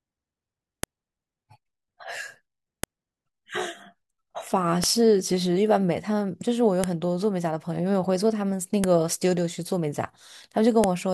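A sharp, loud click snaps through the speech at 0.83, 2.84, 4.84, 6.84, 8.84 and 10.84 s, spaced exactly 2 s apart and unrelated to what the talker is doing. This is a file header played as audio: the stream was built from 2-second WAV pieces joined without stripping their headers, so each piece's few dozen header bytes are decoded as sample values, producing a brief burst at every seam.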